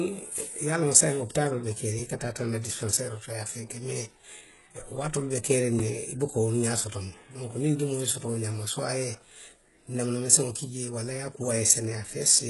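It's a speech clip, and the whole thing carries heavy codec damage that sounds like HE-AAC compression, likely at a very low rate, which fits something around 12 kbps. The lower band holds together, but the treble is rebuilt from copies of the lows rather than carried through, so sibilants come out gritty and a bit lispy, the top end has a metallic shimmer that doesn't quite match the voice's harmonics, and nothing at all sits above 11.5 kHz. Separately, at 5.79 s, between "be keeriŋ" and "ne i buka wolu", there's a block of digital silence about 5 ms long. The audio drops straight to silence and comes straight back with no fade, so it registers as a quick tick rather than an audible gap. That kind of hard dropout points to the output buffer not being filled in time, leaving a short run of empty samples.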